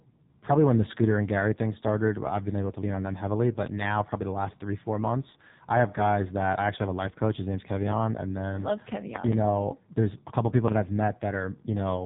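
From start to finish the speech has gone through the AMR narrowband mobile codec, the old 2G/3G phone codec, and it's heavily damaged. Everything above about 3.8 kHz is gone, so the voice sounds boxed-in and phone-like. The codec rebuilds speech from a simple vocal-tract model fed by a few pulses per short subframe, and at this starvation level the voice comes out buzzy and synthetic, which fits one of the low AMR modes around 6 kbps.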